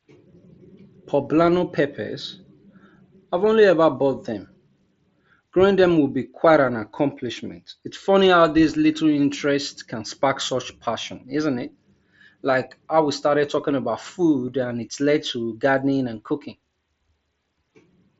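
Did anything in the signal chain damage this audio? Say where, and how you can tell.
No, nothing in the chain damaged this speech.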